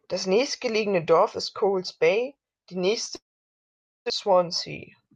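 Speech, with one long network dropout from 3.15 to 4.12 s. The last sound smears into a fading buzz. Then 0.85 s of silence follows. Speech resumes with 0.82 s lost and its timing shifted by about a tenth of a second, likely from packets never arriving.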